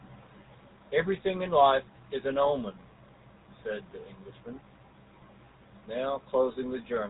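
Speech that has passed through the GSM full-rate codec for its whole length. The encoder rebuilds the signal from a vocal-tract filter excited by a sparse, regularly spaced pulse train, with a bit budget that fits the 13 kbps full-rate mode, and it discards the band above about 3.8 kHz. The result is plainly audible damage: a buzzy, gravelly roughness on the voice and a muffled top end.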